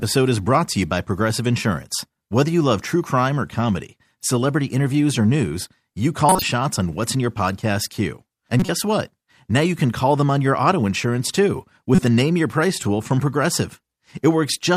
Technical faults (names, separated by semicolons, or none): corrupt frame decoded